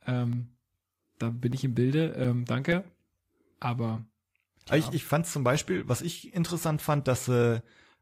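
CD scratch ticks run from 0.33 to 3.2 s and again from 3.89 to 5.8 s. A scratch corrupts more data than error correction can rebuild on each disc revolution, so the player patches the damage, leaving regular ticks, about five a second, each only a few milliseconds long, over the speech.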